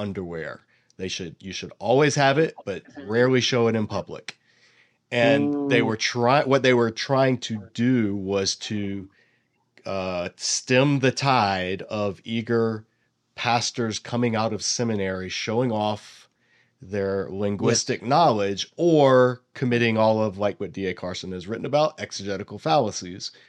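Speech recording; no technical faults can be heard.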